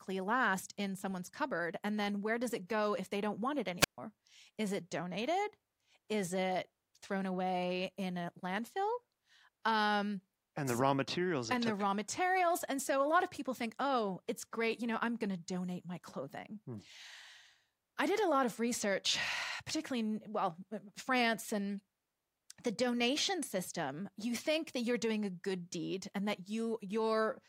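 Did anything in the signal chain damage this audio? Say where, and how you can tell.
Yes. At 3.79 to 3.98 s the speech shows a wireless microphone squelch dropout at the radio link: hiss rises, then the receiver's squelch mutes the output for about 139 ms, leaving a hole of near silence before the voice returns. The FM signal faded below the squelch threshold.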